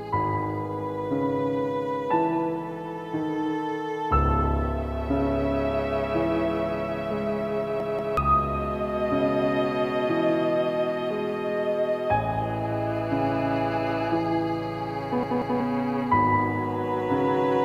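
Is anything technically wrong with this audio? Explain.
Yes. At 7.80 to 8.17 s and again at 15.23 to 15.60 s, a piece of about 186 ms stutters three times with hard joins, skipping roughly 0.4 s. This is a repeated buffer: fresh audio arrived late, so the last buffer replayed, which fits an 8192-sample buffer.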